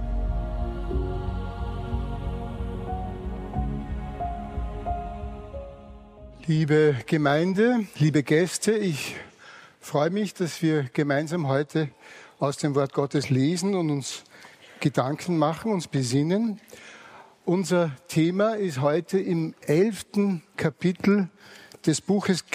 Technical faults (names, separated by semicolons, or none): none